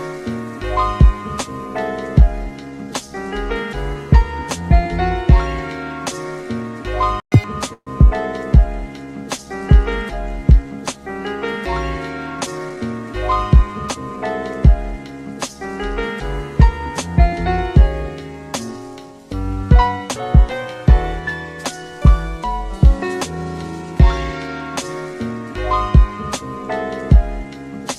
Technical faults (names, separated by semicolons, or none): playback stall; catch-up at higher speed; call audio freeze; jitter buffer speed-up